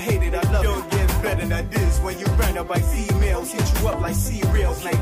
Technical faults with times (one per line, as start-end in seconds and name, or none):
none